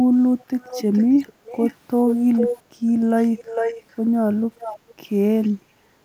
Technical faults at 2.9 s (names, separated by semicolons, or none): echo leak